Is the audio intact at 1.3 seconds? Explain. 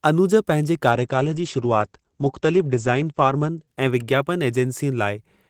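No. A call bitrate drop runs from 0.92 to 4.99 s, after "अनुज पंहिंजे": the encoder falls from 32 to 12 kbps and the band narrows from 20 kHz to 8 kHz, so the speech sounds muffled and rough.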